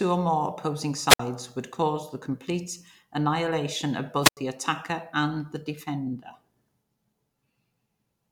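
At 1.07 to 1.20 s and again at 4.21 to 4.37 s, the speech breaks up with a wireless microphone squelch dropout. The analogue FM link weakens, hiss rises, then the receiver's squelch mutes the output for about 59 ms and 83 ms respectively.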